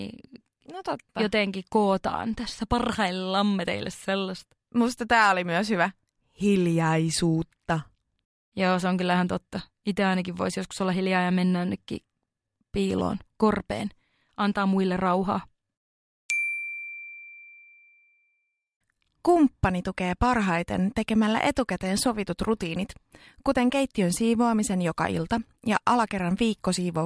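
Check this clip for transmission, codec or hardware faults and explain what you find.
No faults detected.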